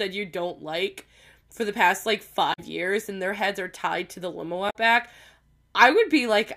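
Damaged data in a compressed stream hits at 2.50–2.59 s and 4.66–4.76 s. Corrupted bytes throw the decoder off sync while it hunts for the next frame header, leaving brief glitches in the speech.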